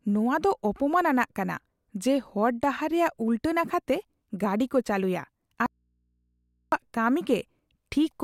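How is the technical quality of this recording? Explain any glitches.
One fault affects the technical quality of this speech recording. From 5.66 to 6.72 s, just after "ᱠᱚ ᱪᱟᱹᱞᱩᱭᱟ", there is an audio dropout to a faint residue. The signal abruptly vanishes for about 1.06 s, leaving only mains hum roughly 45 dB down, likely from a live but unconnected input.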